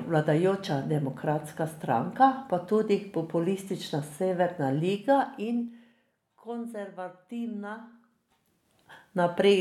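From 4.84 to 6.12 s you get zipper noise on the speech: the level drops by about 15 dB, but it moves in hard 3 dB jumps, around four a second, with no smoothing between them. Each jump leaves a small click, so while the level is falling there's a quick ticking or zipping riding on the voice.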